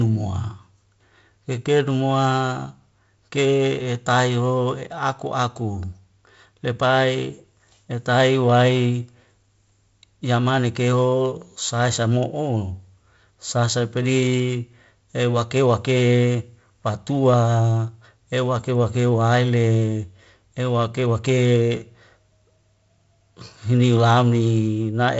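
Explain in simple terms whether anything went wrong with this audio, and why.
Nothing went wrong with this audio, which is speech sent over a wideband phone connection working as it should.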